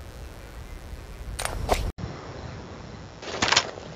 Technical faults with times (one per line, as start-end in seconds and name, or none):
0.00-3.96 mains buzz
1.90-3.96 input switched to a poorer device